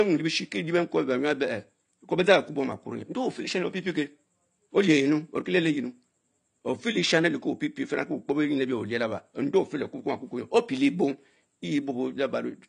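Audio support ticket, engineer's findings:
Speech dull across the whole clip, no content above 9.9 kHz, sibilants fizzy, sustained vowels warbling and smeared. Likely AAC compression (AAC-LC); the damage fits a low bitrate around 32 kbps. The encoder coarsely quantises each frame's spectrum, drops weak bands and fills gaps with substitute noise. Unlike a simple low-pass filter, which only removes treble, this shows the fizz and warble of spectral quantisation below the cut-off as well.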